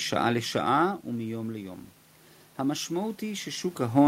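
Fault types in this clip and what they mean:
Automatic gain rising: from about 2.57 s to the end, the level control responds to an input that has dropped by about 11 dB and slowly pushes its gain back up, so the sound swells over more than a second. Unlike a talker moving away from or toward the microphone, as happens near 0.5 s and 3.5 s, the room noise swells along with the voice, which shows the change comes from the gain stage rather than the source.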